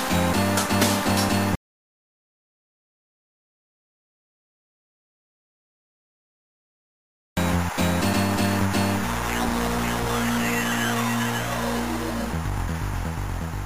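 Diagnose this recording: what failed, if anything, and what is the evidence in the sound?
Audio dropout to silence from 1.55 s to 7.37 s: the sound cuts off abruptly into silence for 5.8 s. The likely cause is a lost input link while recording continued.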